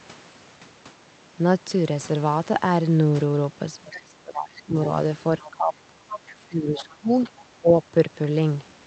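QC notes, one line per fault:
3.84–4.75 s, 5.4–5.94 s, 6.42–7.3 s and 7.61–7.68 s: speech suppressed in double talk. The talker's level sinks by roughly 10 to 20 dB in these spans, deepest in the first and last. It's likely the echo canceller hearing both sides at once, failing to tell the talker from the loudspeaker echo, and ducking everything.
5.44–5.5 s, 6.1–6.32 s and 6.77–6.93 s: other side's voice leaking through. Short scraps of a second voice sit under the talker, loudest at 6.1 s (about 10 dB down) and faint elsewhere (about 20–25 dB down). This is likely far-end audio from the loudspeaker getting back into the mic because the canceller didn't strip all of it, with both riding the call codec's roughly 8 kHz top end.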